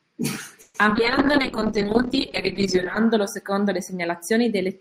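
In this short speech recording, at 0.61 s the sound hangs on as a fading buzzy continuation for about 0.15 s, then resumes where it left off with nothing lost. That is a call audio freeze, most likely packets held up in transit so the jitter buffer ran dry, with the receiver stretching the last sound until they arrived and pushing playback about 130 ms later. Right after, at 0.86 s and again at 0.89 s, come two brief smears, each short concealed packet loss: about 20 ms of audio failed to reach the decoder, and the receiver bridged the hole by extending the preceding sound before blending back in. At 0.94 s the audio jumps forward, a skip ahead in which around 70 ms is simply gone and the two sides butt together, pulling the delay back by roughly 50 ms. From 0.96 s to 3.05 s the speech turns muffled and watery, a call bitrate drop from 48 to 7 kbps, held at the lowest rate for about 2 s, which forces Opus into coarse coding and strips the high frequencies. 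Inside that stretch, from 1.32 s to 1.96 s, the speech drags slightly at unchanged pitch, a jitter buffer slow-down that repeats pitch periods to add 38 ms of reserve, running at 95% speed.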